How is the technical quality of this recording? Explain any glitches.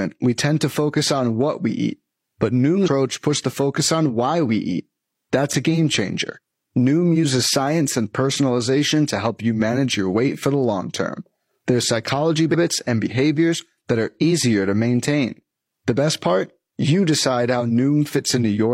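Two short glitches interrupt this speech recording, both from damaged data in a compressed stream. The first runs from 2.84 to 2.88 s, between "what we eat but" and "puts the focus on". The second runs from 12.50 to 12.56 s, just before "and behaviors that are". At each point part of the compressed data was corrupted, so the decoder misread those frames, lost sync and had to hunt for the next valid frame header. The result is a brief chirp, squawk, click or short hole of about 50 to 60 ms.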